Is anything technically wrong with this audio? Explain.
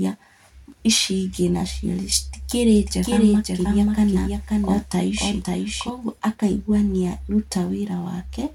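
Yes. From 2.76 to 5.90 s there is a doubled audio track. A second copy of the speech trails by about half a second, roughly 5 dB quieter. It is dry and full-band, and cuts in and out abruptly. A slower second capture path is the likely cause.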